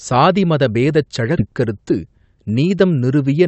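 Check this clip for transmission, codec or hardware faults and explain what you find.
Two transmission faults affect this speech clip.

Skip ahead, 1.37 to 1.39 s, right after "சாதிமத பேதச்": around 0.7 s of audio was dropped, so the speech jumps forward, joined almost seamlessly with nothing missing audibly filled.

Jitter buffer speed-up, 1.47 to 2.82 s: with excess audio still buffered, the receiver trimmed short pitch-period slices, around 150 ms in total, so the speech runs at 109% speed, hurried but unchanged in pitch.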